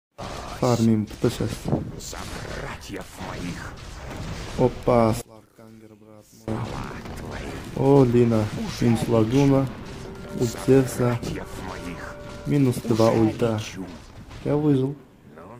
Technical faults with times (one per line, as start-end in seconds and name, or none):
5.21-6.48 one channel inverted